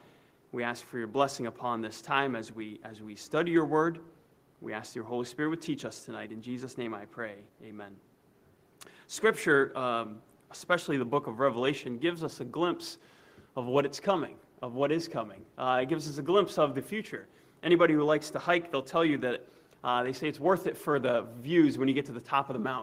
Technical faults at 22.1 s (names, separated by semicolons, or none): none